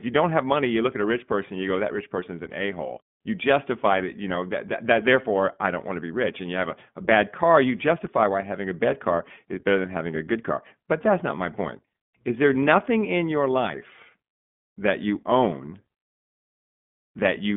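From start to finish the speech carries iLBC codec damage. Nothing above about 3.8 kHz survives, and the sound sits in a telephone band of roughly 150 Hz to 3.5 kHz, so sibilants lose their edge and the low end thins. Each short frame's excitation is coded on its own, which gives the speech a plainly audible rough, synthetic grain. The texture suggests 20 ms frames at about 15.2 kbps.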